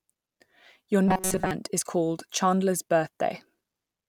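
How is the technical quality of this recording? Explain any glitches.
One glitch: from 1.08 to 1.51 s, just before "is called", the speech becomes robotic sound from repeated short buffers, a metallic 188 Hz buzz across most of that stretch. It is likely caused by starved playback looping a roughly 5 ms buffer. Unlike a dropout, the sound never goes silent.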